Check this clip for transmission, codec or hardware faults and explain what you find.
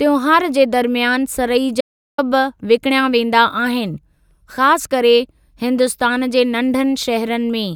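One fault is audible: an audio dropout to silence from 1.81 to 2.18 s, right after "जे दरमियान सरई". The speech cuts off mid-flow and about 375 ms of it is simply gone. The gap is silent with no room tone, so it isn't a natural pause or a noise gate closing gently. The likely cause is a brief loss of input, such as a link failure or momentary mute, while the recorder kept writing silence.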